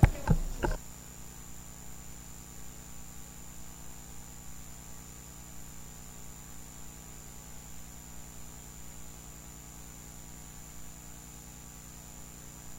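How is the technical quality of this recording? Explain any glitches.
Nothing stood out as a technical problem on listening, so there are no glitches to explain.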